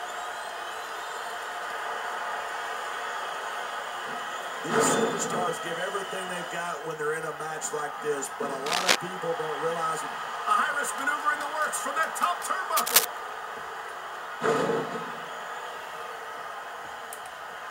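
Cable scratch noise rasps over the sound at 8.66–8.96 s and 12.76–13.05 s, louder the second time. A worn connector being moved is the likely cause.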